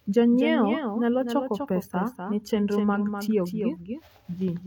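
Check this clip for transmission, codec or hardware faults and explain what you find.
One fault runs through the whole clip. Doubled audio track, throughout: the speech is likely captured twice, with a slower second path adding a copy about 300 ms late. That copy sits roughly 5 dB below the original, full-band and dry, heard as a flat, roomless repeat trailing each phrase.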